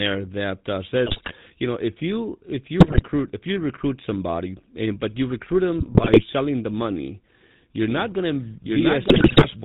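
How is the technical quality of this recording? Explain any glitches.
The recording has poor technical quality: narrowband, coded speech with several decoding bursts and a doubled track near the end.

The GSM full-rate codec shapes the entire clip. Its vocal-tract model is driven by sparse, regular pulses, which gives the voice a plainly audible buzzy, gravelly roughness. This fits 13 kbps GSM. A spectrogram shows a hard ceiling at 4 kHz with empty space above.

GSM bit errors occur at 1.06–1.33 s (after "that uh", before "you know if you"), 2.80–3.04 s (after "know if you if", before "if you recruit somebody"), 5.78–6.22 s and 9.08–9.46 s. Corrupted filter, pitch and gain values cause squawks, pops and gargling. These appear as smeared spectral blotches and sudden waveform spikes.

A doubled audio track runs from 7.90 s, after "the money you're", to the end. A second full-band copy plays about as loud as the original, roughly a second behind, with no decay or room colour. 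The likely cause is a slower second capture path. The waveform shows overlapping, offset speech envelopes that begin abruptly.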